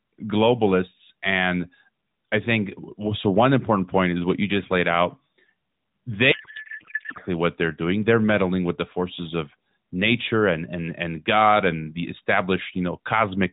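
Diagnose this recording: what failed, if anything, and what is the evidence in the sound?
A codec payload misread breaks the speech from 6.32 to 7.18 s. For that stretch the speech gives way to garbled noise and warble that barely tracks it. Normal speech returns abruptly at 7.18 s. The stage is the codec, at depacketisation. The decoder takes in valid-looking AMR frames but finds the fields at the wrong bit positions. That fits octet-aligned AMR being unpacked as bandwidth-efficient. The surrounding narrowband AMR sound carries only light coding damage.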